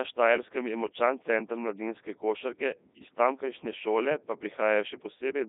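Codec 2 vocoder damage runs throughout. Only pitch, voicing, energy and a spectral envelope survived, and the speech was rebuilt from sine waves, so it sounds heavily robotic and buzzy. It is confined to 200 Hz to 3.7 kHz, with nothing above 3.8 kHz, which fits a 3.2 kbit/s mode.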